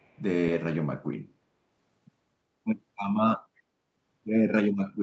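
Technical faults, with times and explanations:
0.00 to 0.22 s, echo leak: a very faint trailing copy of the speech sits far below the main sound, arriving about 0.34 s behind it. This is likely a leak from a loudspeaker at the far end of the call, where the echo canceller failed to fully remove what its microphone picked up and sent that residue back. It survives only in this brief opening scrap, and, like the rest of the call audio, it is band-limited to 8 kHz.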